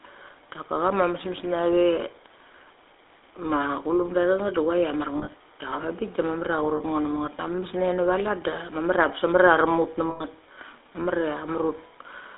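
Speech carried through a GSM full-rate codec throughout: band limited to roughly 300 Hz–3.6 kHz, with the buzzy, gravelly roughness typical of a 13 kbit/s stream. Lost GSM frames appear just after "a mar" from 5.18 to 5.34 s (scattered, short runs), at 6.76–6.81 s, and at 10.1–10.23 s, each heard as a brief metallic, ringing hold of the preceding sound.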